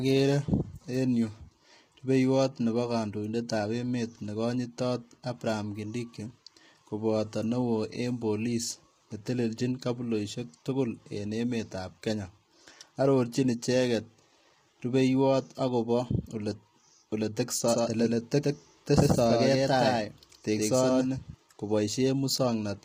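From the start, the speech sounds rough and grainy, with hiss between harmonics and a thin top end, likely from heavily squeezed low-delay AAC compression around 24 kbps. From 17.69 to 21.35 s there's a doubled audio track: a second, equally loud copy trails about a tenth of a second behind, likely from a parallel capture, and cuts in and out abruptly.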